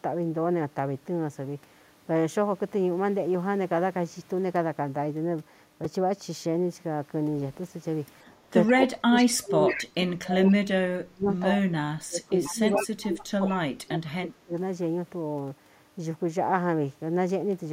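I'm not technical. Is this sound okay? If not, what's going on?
No. There are three problems.

At 5.84 s there is a repeated buffer: a tiny slice of sound, about 2.7 ms long, plays five times in a row because fresh audio arrived late. At that size it comes across as a brief click or buzz rather than a stutter.

Echo leak shows up at 8.67 s, 9.16 s, 9.67 to 9.85 s, 12.45 to 12.87 s and 13.47 s. A copy of the voice returns about 134 ms late, likely because the echo canceller on a loudspeaker end let some of its microphone pickup through.

Speech suppressed in double talk occurs from 8.74 to 11.74 s, 12.06 to 12.61 s and 12.78 to 14.53 s. The voice dips sharply, at times almost vanishing, likely because the echo canceller turned everything down while both sides spoke at once.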